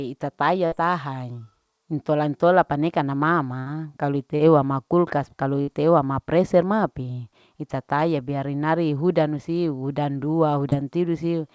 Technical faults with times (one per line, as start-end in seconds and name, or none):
0.66-0.74 burst of packet loss
3.60-3.68 burst of packet loss
4.36-4.41 short concealed packet loss
5.61-5.69 burst of packet loss
10.69-10.74 short concealed packet loss